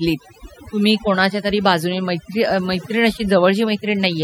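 Throughout the speech, the background drops to near silence dotted with twinkling specks. This is overdone noise removal: a noise reducer set too hard shuts off individual frequency bands near its noise estimate, taking quieter vocal detail with them.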